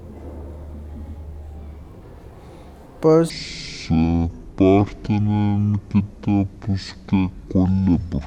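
Section at the wrong speed from 3.3 s, at "a veces", to the end: speech slows to 0.53×, roughly ten semitones deeper, likely from a mismatched clock.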